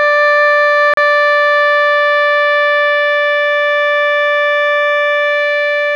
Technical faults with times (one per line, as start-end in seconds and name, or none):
0.94-0.97 gap between stream segments